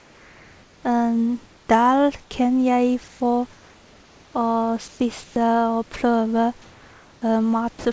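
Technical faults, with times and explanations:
1.46–1.67 s, 3.08–3.20 s (just after "kan jeg"), 3.53–4.34 s, 4.88–5.00 s, 5.24–5.36 s and 6.62–7.22 s, comfort noise in place of the background: in each pause the real room noise, sitting roughly 25 to 31 dB below the loudest speech, gives way to a flat, featureless hiss. It is about 2 to 4 dB quieter in most gaps and about 1 dB louder at 4.88 s. The likely cause is discontinuous transmission: the sender goes quiet while no speech is detected, and the receiver synthesises noise shaped only roughly like the background, so its detail vanishes.
7.79–7.85 s, sound dropped by the voice detector: about 50 ms of sound is missing near the end, and roughly 60 ms of the same smooth synthetic noise sits in its place before the signal resumes. The detector likely judged this stretch of sound to be background and stopped sending. The receiver then filled the gap with comfort noise.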